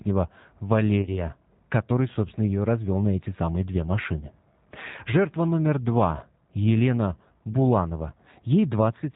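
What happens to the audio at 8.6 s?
At 8.6 s the speech carries G.729 codec damage, present from start to end. The sound is rebuilt from a vocal-tract filter and a sparse pulse excitation, which fits an 8 kbit/s rate. Nothing above 4 kHz remains, and the rough, synthetic buzz separates it from a simple low-pass filter.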